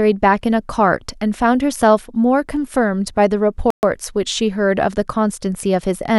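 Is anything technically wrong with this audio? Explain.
Yes. From 3.70 to 3.83 s the speech drops to silence for 126 ms, likely a Bluetooth stall: delayed packets emptied the headphone buffer. The waveform goes flat and the spectrogram shows a blank vertical gap.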